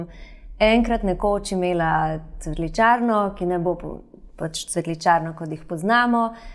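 No technical faults can be heard anywhere in the recording, and the signal stays steady and intact throughout.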